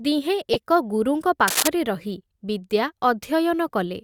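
Corrupt frame decoded, 0.53 to 0.55 s, just before "ଏକ ଗୁରୁଙ୍କ": a short run of damaged compressed frames was played despite flipped bits, so misread gains and codes throw energy to the wrong frequencies. It sounds like a brief chirp or burst of noise, with the error peaking around -5 dBFS.

Cable scratch noise, 1.48 to 1.68 s, after "ଏକ ଗୁରୁଙ୍କ": dense, uneven crackling rustles over the speech at roughly its own level. It most likely comes from a worn cable or connector whose contact resistance fluctuated rapidly as it moved.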